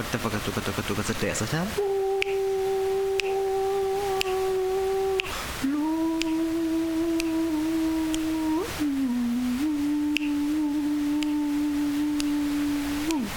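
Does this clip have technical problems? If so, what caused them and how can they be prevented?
No, there are no audible dropouts, clicks, distortion or other faults anywhere in the clip, so nothing needs preventing.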